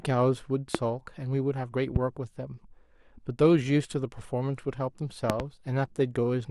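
A loud pop lands at 0.75 to 0.77 s. A second, the same, comes at 1.96 to 1.99 s. At 5.30 to 5.43 s a double pop arrives, two thumps close together. Each peaks at roughly 20 dB above the speech. The speech carries on underneath each one. The likely cause is a sudden voltage step, from a plug, switch, static or driver glitch. The following circuits shape it into a sharp thump.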